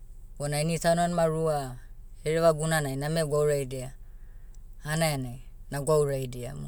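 Listening through the speech, nothing stood out as a technical problem.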